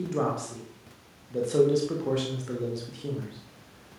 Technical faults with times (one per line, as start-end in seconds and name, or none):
none